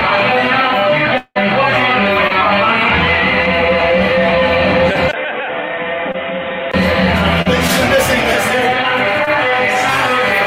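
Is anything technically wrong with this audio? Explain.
Yes, there are three kinds of fault.

From 1.17 to 1.37 s, a long network dropout is the likely cause: about 180 ms of audio never arrived. The receiver stretched the last sound into a fading buzz or hiss, which settles into roughly 50 ms of near-silence. The audio then resumes further along, and the lost stretch is simply gone.

Short concealed packet loss occurs at 2.27, 6.12, 7.42 and 9.25 s. In each case a small piece of the stream, about 20 ms (40 ms at 7.42 s), missed the decoder. The decoder patched the gap by extending the preceding sound and then blending back in. Each event is heard as a brief smear or wobble, slightly longer at 7.42 s.

From 5.11 to 6.74 s, the input appears to have switched to a poorer device, most plausibly a different microphone or a headset's call mode. After a 20 ms gap at the switch, nothing above 3.8 kHz comes through. 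The sound turns dull and boxy, drops a few decibels in level, and carries a faint new background noise well beneath it. The original brightness returns at 6.74 s.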